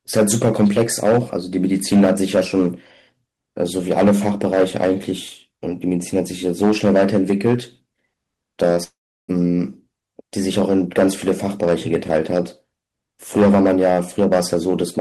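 From 8.83 to 9.30 s, the speech dissolves into a fading buzz, then 0.35 s of silence. Likely a long network dropout; the lost audio never returns.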